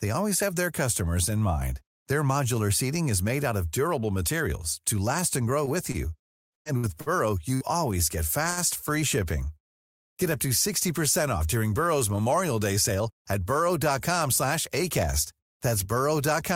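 Repeated packet loss runs from 5.65 to 7.64 s, just after "to last and grow". Seven holes, the longest 114 ms, are patched by extending earlier sound, so the speech turns choppy and robotic until "always get".

A short stall from a late packet follows at 8.51 to 8.60 s, right after "always get". The empty jitter buffer holds the last sound for 62 ms, then resumes with nothing lost.

A jitter buffer speed-up from 12.95 to 13.39 s trims about 50 ms in small pitch-period cuts. The speech runs at 110% speed with unchanged pitch and sounds briefly hurried.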